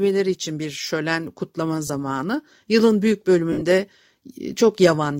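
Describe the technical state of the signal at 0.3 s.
At 0.3 s the signal is intact, with only the light coding of the lossy compression present and no fault at that moment.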